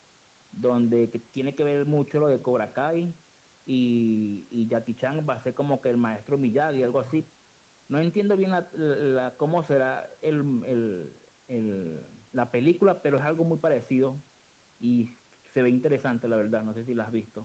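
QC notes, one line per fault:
No faults heard.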